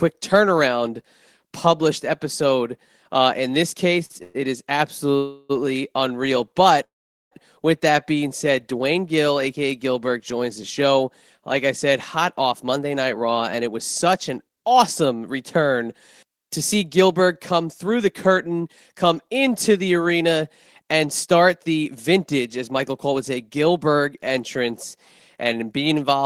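Repeated stalls (stutter) occur from 4.05 to 4.36 s. The packets kept arriving more slowly than the speech was played, so the jitter buffer emptied three times in a row. Each time, the receiver stretched the last sound to bridge the wait. The longest gap is 113 ms, and 189 ms is filled in all, which is about 61 percent of that span. Nothing is missing, but the speech catches and drags in short jerks.

Call audio freezes follow at 5.16 to 5.51 s and at 6.84 to 7.33 s, likely because packets were held up on the network until the jitter buffer ran dry. In the first, 331 ms of the last sound is extended as a continuous buzz or hiss that never drops to silence. In the second, 473 ms is filled, and the concealment fades to silence for 430 ms of it. Afterward the speech resumes where it stopped, with nothing lost, but it now runs that much later.

Jitter buffer speed-up appears at 12.17 to 15.01 s, 17.01 to 17.91 s and 21.82 to 23.95 s. 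The buffer had built up more delay than it wanted, so the receiver repeatedly cut out short pitch-period slices to catch up. Roughly 200, 70 and 150 ms are removed in these three spans. Speech plays about 8 percent fast at unchanged pitch, which sounds hurried.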